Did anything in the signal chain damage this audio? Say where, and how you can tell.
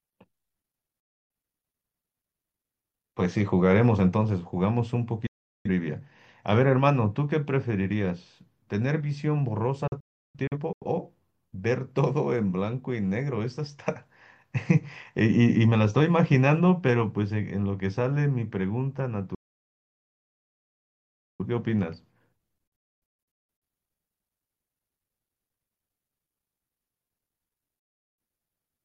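Yes, a digital broadcast dropout at the receiving and decoding stage. The speech mutes at 1.0–1.3 s, 5.27–5.7 s, 9.87–10.86 s, 19.35–21.45 s, 22.67–23.62 s and 27.79–28.18 s. The 9.87 s and 22.67 s events break into several short holes. Each mute fades out within about 3 ms to silence, then the programme resumes with that stretch missing. This is the decoder muting on corrupt frames. A loose analogue connection would crackle, and network loss concealment would smear or repeat sound rather than leave clean silence.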